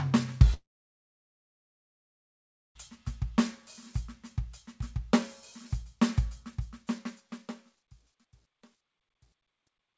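It's a music clip, and the first thing you notice is that it falls out almost right away: at 0.54 s the sound stops and doesn't come back until 2.90 s. The receiver stretches the last bit of audio for a moment, then it's essentially dead silence for around 2.1 s. That's most likely a long network dropout, where about 2.2 s of audio simply never arrived, and the music resumes further along with that chunk gone. The second problem is at the end. A fade-out starts around 6.4 s, and from 6.42 s onward it picks up truncation distortion on the fade. As the level drops, the tail turns grainy, and from about 7.51 s to the end at 9.98 s it is at its grittiest. That fits a fade or gain stage working at roughly 11 bits with no dither, so the quietest part of the waveform collapses into a few coarse square steps. All of this came through a G.722 call path at 64 kbps, which is why there's nothing above 8 kHz.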